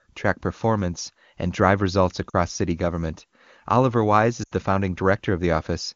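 At 2.30 s, right after "performance and drive results" and before "city government", the speech briefly dips and warbles for about 40 ms; at 4.43 s a longer 100 ms stretch drops to near silence before recovering a little rough. Both are lost AMR speech frames: corrupted frames were concealed by replaying the last good pitch and vocal tract settings at falling gain. The lengths point to two and about four frames, against otherwise clean wideband coding.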